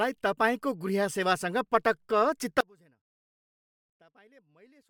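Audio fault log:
2.61 s to end, audio dropout to a faint residue: the speech cuts off abruptly and never returns, leaving only faint sound roughly 30 dB down. That sudden drop with a live path still behind it is likely a lost feed upstream, not a pause.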